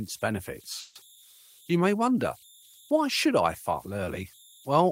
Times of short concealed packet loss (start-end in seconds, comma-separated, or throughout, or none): none